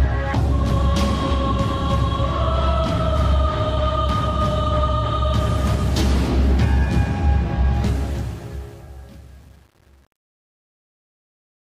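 From 7.74 s the fade-out turns gritty, worst from 8.37 to 11.7 s: truncation distortion on a fade, which fits an undithered 8-bit stage.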